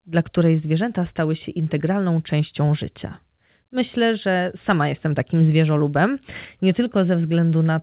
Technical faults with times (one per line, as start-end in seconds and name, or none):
none